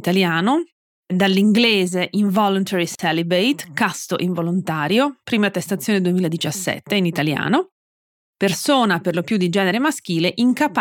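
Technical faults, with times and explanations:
2.95–2.99 s, gap at a join of encoded pieces: two separately encoded sections were joined without trimming the encoder's start-up delay and final-frame padding. This leaves a 39.5 ms silence cutting into continuous speech, with smeared edges, before the speech resumes where it stopped.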